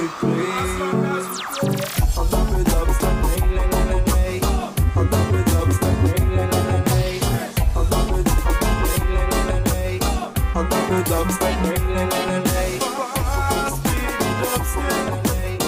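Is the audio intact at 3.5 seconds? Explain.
Yes, at 3.5 seconds the audio is intact, with no dropout, click, distortion or other fault audible at that point.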